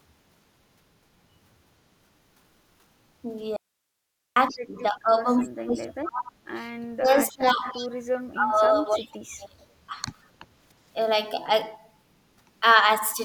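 At 3.57 s the speech cuts out abruptly and does not return until 4.36 s. That is an audio dropout to a faint residue, lasting about 0.8 s. Only hiss fills the gap, about 55 dB below the speech. The break is sudden, not a pause or a fade. The signal was likely lost upstream while the path after the break stayed live.

Right after, from 4.49 to 4.57 s, a short echo leak is heard. A delayed copy of the far side's speech arrives 305 ms late, about 25 dB below the speech. The echo canceller likely failed to remove all of what its microphone picked up from the loudspeaker.

From 4.50 to 6.53 s the speech is suppressed in double talk. It dips in pieces while the other side talks, with roughly 2 s affected and the deepest drop about 35 dB. Both sides likely spoke at once, and the canceller turned everything down.

The same suppression returns from 6.82 to 7.77 s, about 0.7 s in all, dropping about 25 dB. 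Again both talkers likely overlapped. Another echo leak overlaps its end, from 7.72 to 7.89 s. It comes back 305 ms late at about 20 dB down, likely residual loudspeaker pickup.

From 8.34 to 9.63 s the speech is pushed down again, about 1 s in total and about 25 dB at worst, likely from overlapping talk. Inside that stretch, 8.97 to 9.08 s, an echo leak returns. It is 305 ms delayed and about 20 dB down, likely uncancelled pickup.

A brief dip of about 5 dB at 9.89 to 9.96 s, about 70 ms, is a milder case of suppression, likely from a moment of double talk.

At 10.74 to 10.85 s the room background drops by about 10 dB for 100 ms, then comes back. This is background gated by the echo canceller. It clamped the microphone hard while the loudspeaker played, then released it.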